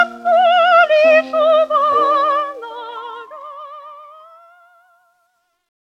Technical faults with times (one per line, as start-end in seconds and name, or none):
2.35-5.88 truncation distortion on a fade